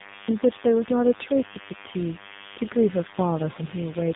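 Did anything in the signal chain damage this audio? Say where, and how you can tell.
Yes. A thin, harmonic-rich 100 Hz buzz runs throughout, well under the speech: DECT cordless phone buzz, 10 ms radio bursts rectified in analogue wiring.

Speech sounds rough, muffled and warbly, with nothing above 3.8 kHz. This is tandem speech coding, pointing to three speech codecs re-encoding each other's damage.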